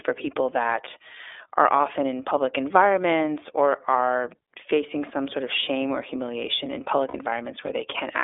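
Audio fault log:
throughout, iLBC codec: the speech is confined to about 300 Hz–3.6 kHz in 30 ms blocks, sounding slightly rough and synthetic, which fits the 13.33 kbps mode. The spectrogram shows empty space above 3.6 kHz.
1.76–1.80 s and 7.08–7.16 s, lost iLBC frames: a 30 ms gap just before "in public environments or" and a 60 ms gap just after "shame or humiliation in" are each filled with a repeated pitch cycle mixed with noise. Each sounds like a brief held, buzzy vowel, and the speech recovers immediately afterward. The waveform shows copied repeating cycles, and the spectrogram shows flat, frozen harmonic stripes.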